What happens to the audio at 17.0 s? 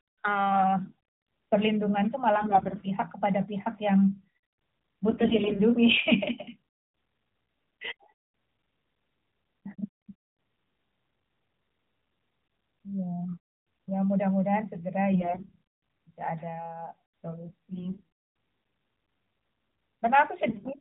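Nothing goes wrong at 17.0 s: the speech carries straight through that moment without a dropout, click or other break.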